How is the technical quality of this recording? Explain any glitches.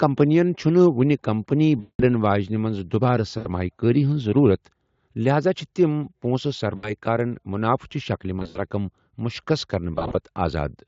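The recording is marred by five dropouts where VoIP packet loss was concealed by the speech codec; the Speex coding underneath leaves at most faint damage.

Packets failed to arrive at 1.79 to 2.03 s (after "وۄنہِ کمپنی", before "واجِنہِ منز دُبارٕ"), 3.37 to 3.49 s (before "كٲری ہنز ضروٗرت"), 6.75 to 6.91 s, 8.39 to 8.58 s (before "رقم مُشخص") and 9.95 to 10.18 s. In each gap the decoder kept repeating its last pitch and spectral shape at a falling level. The result is a stretched, buzzy or smeared stretch of sound that fades rather than a clean silence. The first gap is the longest, about 200 ms, which fits ten 20 ms frames lost in a row. The second and third each lose about 80 ms. The last two are scattered losses of about 100 ms spread over 160 ms, with runs of at most 60 and 40 ms.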